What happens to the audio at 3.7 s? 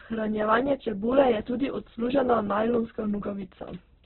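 At 3.7 s, as throughout, the speech is band-limited to about 4.1 kHz and rough and grainy, likely from heavy Opus compression at a very low bitrate. The roughness comes from noise filling the starved bands, not the swirling holes of MP3.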